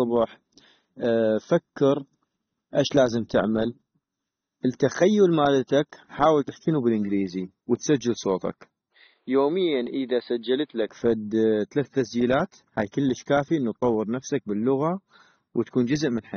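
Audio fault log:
throughout, AAC compression: The whole recording is dull and plainly smeared, with a watery, fizzy edge on sibilants and held vowels, and nothing at all above about 6.3 kHz. This is likely lossy AAC-LC coding at a low rate, consistent with roughly 24 kbps, where the encoder drops the top band and coarsely quantises what remains. A spectrogram shows a flat ceiling at 6.3 kHz, with patchy holes and blotchy texture in the upper bands beneath it.
8.92 to 10.89 s, input switched to a poorer device: Right after "تحكينو بالانكليزي وتسجل صوتك" the sound narrows and turns boxy, then opens back up at 10.89 s. There is no gap at either switch and no obvious jump in loudness. The likely cause is the input briefly moving to a narrower-band microphone or headset profile that passes nothing above about 4.8 kHz and adds a faint noise floor well below the speech. On a spectrogram, the ceiling drops from 6.3 to 4.8 kHz for that stretch. 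The waveform envelope stays steady throughout.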